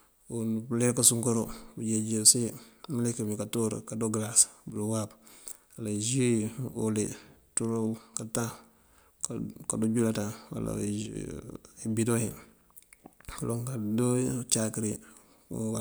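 One channel drops out briefly three times, at 4.70 to 4.76 s, 7.98 to 8.14 s and 11.06 to 11.16 s. Each time the speech abruptly falls about 6 dB and then snaps back, the longest dip lasting about 160 ms. The likely cause is one side of the stereo pair going silent, so that once the channels are summed to mono only half the shared signal remains, producing these short, sudden level holes.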